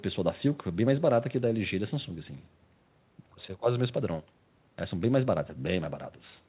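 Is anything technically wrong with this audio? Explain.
No, nothing is technically wrong with this audio.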